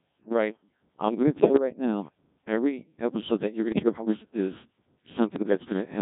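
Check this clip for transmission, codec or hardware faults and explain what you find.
Two faults are audible: very low-rate vocoder coding across the whole clip, and three short bursts of digital radio bit errors.

Codec 2 vocoder, throughout: the speech is rebuilt from sine waves using only pitch, voicing, energy and a spectral envelope, at a rate that sounds like 1.6 kbit/s. With the original waveform discarded, the voice comes out heavily robotic and buzzy.

Bit errors on digital voice radio, at 1.40–1.59 s (after "I'm going to", before "right now every episode"), 3.72–4.05 s (after "episode that you're going", before "us is") and 5.36–5.55 s: an error rate of a few percent corrupts frame parameters, so pitch, level and tone colour jump into warbling, bleeping gibberish.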